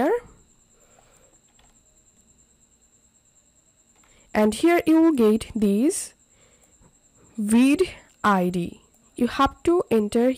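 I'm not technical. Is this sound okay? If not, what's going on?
Yes, nothing wrong can be heard here, so there's nothing to fix.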